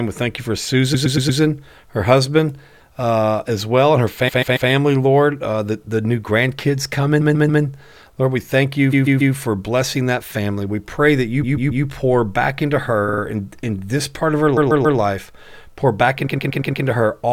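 Repeated frames stutter the speech at 0.93–1.40 s, 4.27–4.69 s after "as well and her", 7.20–7.62 s after "the the new grandkids", 8.92–9.34 s, 11.43–11.84 s, 13.08–13.21 s between "you pour back into" and "in in this part", 14.56–14.98 s and 16.26–16.84 s. Each time, a block of compressed frames plays again three to five times, so the same fragment loops audibly. The blocks are about 139 ms long in most events, about 116 ms at 0.93 s and 16.26 s, and 46 ms at 13.08 s. On a waveform these show as identical copies of one short shape placed side by side. On a spectrogram they show as the same slice of harmonics repeated in a row.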